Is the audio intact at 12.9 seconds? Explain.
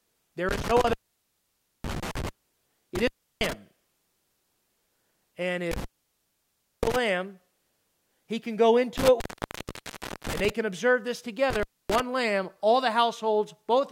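Yes, the speech at 12.9 seconds is intact, with no audible dropout, click, distortion or other fault at that moment.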